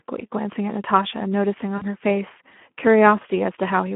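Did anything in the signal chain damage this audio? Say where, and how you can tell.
Yes. The Speex codec damages the whole clip. Speech sits in a narrow line band of 200 Hz to 3.4 kHz. The coding is plainly audible as noisy, hoarse texture. That fits a low bitrate near 11 kbps, leaving too few bits for the excitation.

Network stage: VoIP packet loss, concealed by the speech codec, occurs from 1.77 to 1.83 s. About 40 ms of sound turns into a fading extrapolation, which fits two lost 20 ms frames. The decoder repeats its last pitch and filter while lowering the gain.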